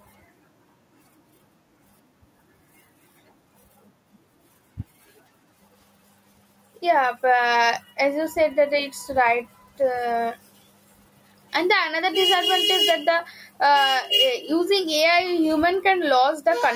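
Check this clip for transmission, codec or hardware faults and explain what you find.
Gain pumping runs through the whole clip, with a level swing of around 10 dB. The likely cause is input gain set far too high for the microphone, with a fast limiter or compressor clamping down on each loud syllable and releasing in the gaps. The result is flattened dynamics, with soft and loud speech sitting close together and sounding squashed and breathing.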